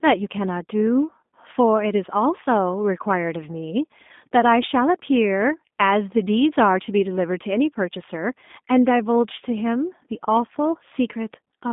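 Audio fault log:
Throughout: G.729 codec, speech rebuilt by a low-bitrate vocal tract model, sounding rough and synthetic; spectrogram shows nothing above 3.7 kHz, little below 200 Hz.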